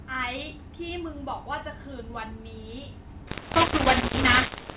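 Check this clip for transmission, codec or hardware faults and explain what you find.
One fault, near the end of the speech: from 3.28 s to the end, the audio turns harsh and gritty, with levels jumping unevenly and a hiss filling the gaps where there should be near silence. This is mu-law and A-law mixed up. Audio encoded with the A-law curve is being expanded with the mu-law curve. Each 8-bit code is mapped to the wrong amplitude, so some samples come out too loud and others too quiet, and the smallest values are pushed well above zero. Before 3.28 s, the G.711 A-law telephone coding at 8,000 samples a second gives the expected narrow, band-limited telephone sound.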